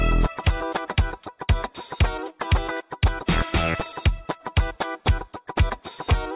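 No technical faults detected.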